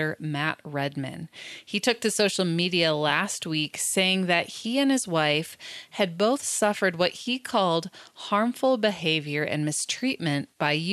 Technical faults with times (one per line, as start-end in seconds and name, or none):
none